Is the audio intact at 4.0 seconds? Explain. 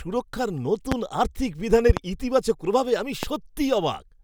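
Yes, the speech at 4.0 seconds is intact, with no fault present at that moment.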